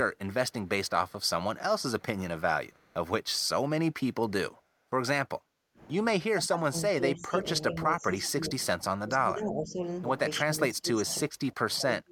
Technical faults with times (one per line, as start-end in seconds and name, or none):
1.08-1.29 echo leak
2.72-2.94 echo leak
6.32-8.50 speech suppressed in double talk
8.78-9.79 speech suppressed in double talk
10.43-12.12 speech suppressed in double talk